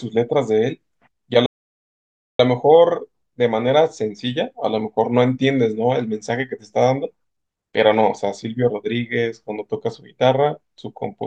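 At 1.46 s the player likely ran out of buffered data or had its thread blocked, causing a playback stall: the speech cuts off in mid-flow and the output stays silent for about 930 ms, resuming at 2.40 s.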